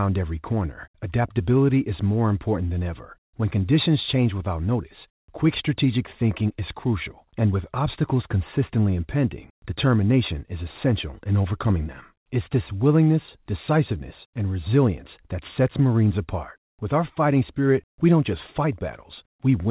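Speech carried over a telephone-band call connection, with nothing technically wrong with it; the absence of content above 4 kHz is simply how that codec sounds.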